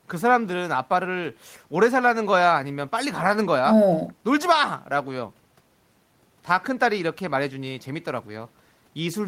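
No technical faults can be heard in this speech recording.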